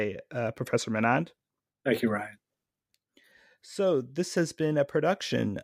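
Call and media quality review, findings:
Nothing to flag on this speech recording; no faults found, so no component or mechanism to chase.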